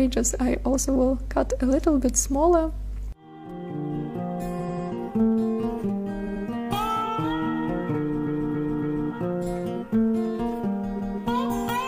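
Repeated frames stutter the audio four times. From 4.55 to 4.83 s, a 93 ms block is played three extra times. From 6.23 to 6.41 s, a 93 ms block plays twice more. From 8.22 to 9.06 s, a 279 ms block is heard three extra times. From 10.96 to 11.15 s, a 186 ms block plays once more. Each stutter comes from a run of compressed frames being written or sent again, so the decoder replays them and the audio grows longer by each repeat.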